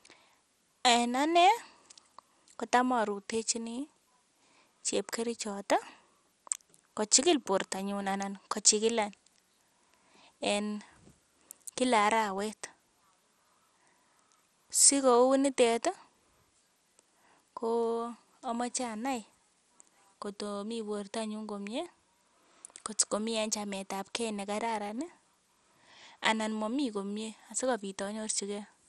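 All the way through, the speech sounds dull and gurgly with nothing above 14.2 kHz, likely MP2 compression starved of bits, something like 64 kbps.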